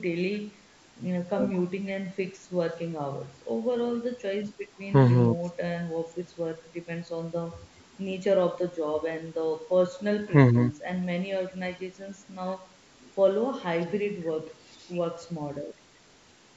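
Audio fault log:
No faults heard anywhere in this speech recording.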